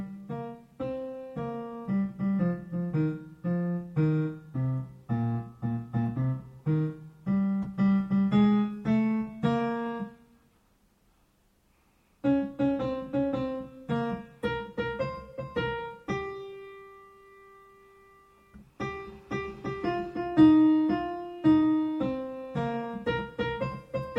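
Nothing stood out as a technical fault on listening.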